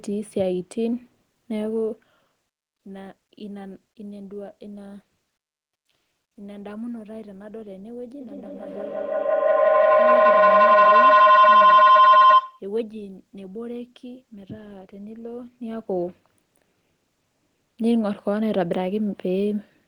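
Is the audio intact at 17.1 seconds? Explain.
Yes, the speech at 17.1 seconds is intact, with no fault at that moment.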